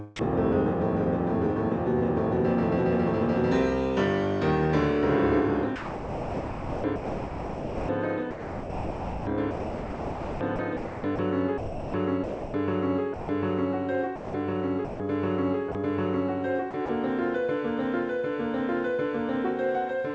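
At 0.16 to 0.19 s the sound briefly gives way to a 30 ms patch of steady synthetic noise. This is likely sound dropped by the voice detector, which judged that instant to be background, stopped sending, and left the receiver to fill the gap with comfort noise. Over three later stretches the audio turns choppy. From 5.76 to 13.29 s about 5 s of it is replaced, from 14.16 to 15.75 s 0.36 s is replaced, and from 16.71 to 16.89 s 60 ms is replaced. These point to sound chopped by the voice detector, which likely toggled sending on and off repeatedly and had the gaps filled with comfort noise, all heard through a call codec path with nothing above 8 kHz.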